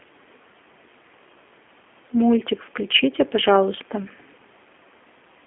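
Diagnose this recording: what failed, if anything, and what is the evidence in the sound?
G.729 codec damage runs throughout, at the codec stage. The speech sits within 250 Hz to 3.4 kHz and sounds plainly rough and synthetic, which fits an 8 kbit/s coder rebuilding each 10 ms frame from a vocal tract filter, a pitch predictor and sparse pulses.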